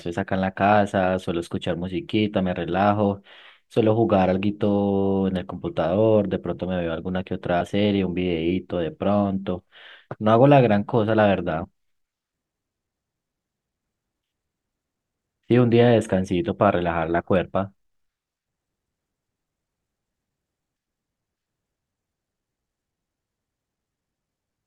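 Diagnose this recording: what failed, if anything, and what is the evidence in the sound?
The codec stage failed, with compressed frames skipped. At 7.60 s the speech jumps ahead about 50 ms. At 11.63 s it jumps about 20 ms. Both fit whole missing 24 ms frames.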